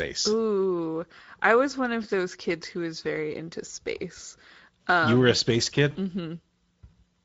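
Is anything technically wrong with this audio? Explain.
Yes, two things. The whole clip has been through the Speex codec, and the coding damage is plainly audible. Speex is an older CELP speech codec, and here it's working at a middling rate, which fits something around 16.8 kbps. There aren't enough bits to model the excitation properly, so the speech comes out hoarse and grainy. Any top end above 4 kHz is just shaped noise rather than real detail.

Then, from about 5.91 to 5.97 s, right after "were a um space", there's VoIP packet loss concealed by the speech codec. Roughly 40 ms of audio went missing, which fits two lost frames. The decoder filled the gap by extrapolating from its last pitch and filter settings while turning the gain down frame by frame. You hear the sound smear into a brief buzzy tone or coloured noise that fades before normal decoding catches up.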